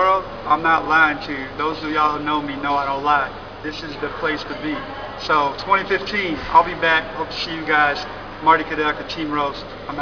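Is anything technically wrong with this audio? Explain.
Yes, aliasing runs throughout. High content sounds gritty and metallic, folded into false tones about 20 dB down. It was resampled without a low-pass, which fits a rate near 11 kHz folding at 5.5 kHz.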